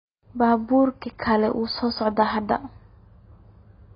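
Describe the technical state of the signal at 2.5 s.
At 2.5 s the speech is carrying the same damage that runs through the whole clip, and it sounds like AAC compression, most likely AAC-LC squeezed hard, which fits something around 16 kbps. Nothing comes through above 5 kHz, so the top end is just gone and the sound is dull. The coder ran short of bits, threw away bands it judged less audible, and smeared what remained, leaving a warbly, fizzy edge on sustained sounds and sibilants.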